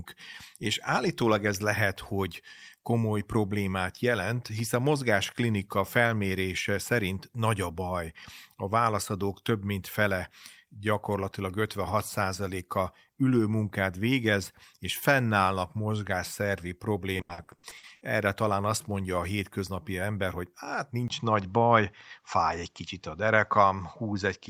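Right after "végez és fennállnak mozgásszervi", from 17.17 to 18.03 s, there's repeated packet loss with a robotic sound. Ten short holes, the longest 80 ms, get patched by stretching the previous sound, so about half that stretch is filler and it turns choppy until "talán azt mondja a".

At 21.08 s, just after "hétköznapi ember hogy hát", there's a 20 ms dropout. From then to the end nothing reaches above 7.6 kHz, so the sound goes duller, at a similar level with only a faint new noise floor. The likely cause is an input switched to a poorer device.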